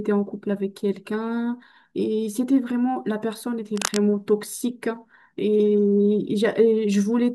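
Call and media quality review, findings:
Cable scratch noise, 3.76 to 4.02 s. Dense, irregular scratching and rustling over the speech for about a quarter of a second, nearly as loud as the speech itself. Likely component: a worn cable, connector or control being moved. Mechanism: contact resistance jumping rapidly as the joint shifts, injecting uneven noise bursts into the signal path. Check and reseat or replace the lead.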